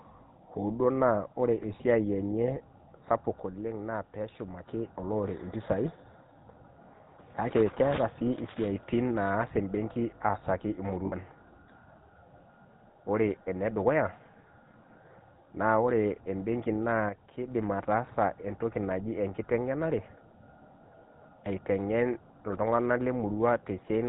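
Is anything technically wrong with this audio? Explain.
Yes. Throughout, the speech sounds buzzy and gravelly, with nothing above 4 kHz. This is the GSM full-rate codec at what sounds like 13 kbps, rebuilding the voice from sparse, regularly spaced pulses through a vocal-tract model.

At 11.06 to 11.14 s, just after "embenki aasaki", a brief rough, metallic ring replaces the speech for about 60 ms. These are lost GSM frames, which fits three 20 ms frames. The last good frame's settings were repeated to fill the gap.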